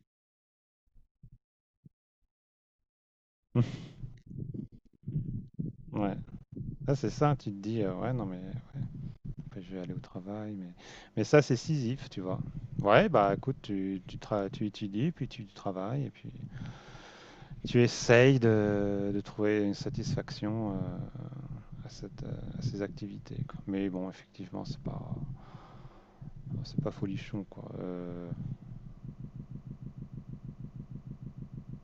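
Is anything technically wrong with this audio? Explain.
Yes. A broken-record loop starts at 29.13 s and runs to the end of the clip. A fragment of speech about 0.16 s long repeats exactly, back to back, about seventeen times. It sounds like a stuck stutter, the same fragment over and over with no variation. The likely cause is a stalled player, encoder or stream that kept resending the last fragment it held. Whatever speech should have followed is lost.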